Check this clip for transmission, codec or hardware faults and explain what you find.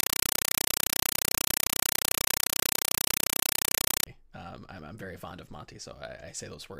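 One fault is present. From 0.0 to 4.07 s, very loud, rapid chattering static takes the place of the speech. This is a compressed stream played as audio: a Dolby Digital (AC-3) bitstream passed over a digital link was treated as ordinary samples instead of being decoded. Each data frame plays as a 5.33 ms burst of noise followed by silent padding, repeating 31.25 times a second, and the data density suggests a 256 kbps stream.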